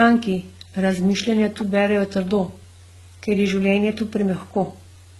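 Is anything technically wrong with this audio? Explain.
Yes. Throughout the speech, the sound carries two different sets of compression artefacts at once, most likely from transcoding between lossy codecs, with a very low-rate HE-AAC encode re-encoded as Opus. The second codec spends its bits on the first codec's smearing and adds its own, so the result is swirly and watery. On a spectrogram, the content stops at about 19.9 kHz, with patchy, blocky texture in the upper bands. The waveform looks ordinary.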